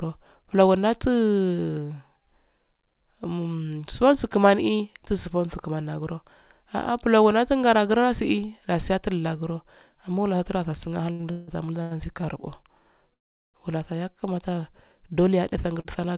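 From 11.12 to 11.93 s the speech drags and catches in a series of repeated stalls (stutter). Packets reached the receiver late again and again, and the jitter buffer ran dry four times. Each time, the last sound was extended until new data came in. About 43 percent of that stretch is filled-in sound, with the longest hold lasting 168 ms. On a waveform the envelope shows small frozen plateaus. On a spectrogram, smeared horizontal bands replace the normal syllable structure.

At 13.13 s the audio drops into a 0.4 s hole and then continues from exactly where it stopped, adding about 404 ms of delay. This call audio freeze was likely caused by packets held up in transit, which left the buffer empty. The concealment is almost entirely silent, so the waveform shows a flat line and the spectrogram a blank vertical strip before the speech resumes.

From 14.12 to 14.63 s a jitter buffer slow-down stretches the sound to 93 percent speed by inserting about 46 ms. 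The buffer was rebuilding its reserve by repeating individual pitch periods or bits of pauses. The pitch stays the same, but sounds are drawn out. A spectrogram shows harmonics that run longer than normal without bending. The waveform repeats near-identical cycles in a row.

At 15.80 s a short stall from a late packet holds the current sound for about 43 ms before playback picks up again, adding the same amount of delay. The late packet left the buffer briefly empty, and the receiver bridged the gap by stretching what it already had. The result is a sound held slightly too long. On a spectrogram it appears as a brief, slightly blurred extension, all of it confined below 4 kHz, which is consistent with a G.711 mu-law call path.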